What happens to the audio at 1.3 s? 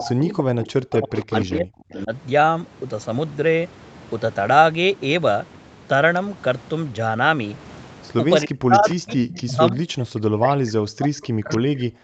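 Speech suppressed in double talk runs from 0 to 2.12 s. The voice dips and breaks up, with the deepest drops of roughly 35 dB and about 1.5 s affected in total. This is likely an echo canceller muting the near talker because it could not separate them from loudspeaker echo.

An echo leak overlaps it from 0.62 to 2.03 s. A delayed copy of the voice trails by 299 ms, roughly 10 dB below the speech. It is likely residue that a loudspeaker-side echo canceller failed to remove and sent back down the call.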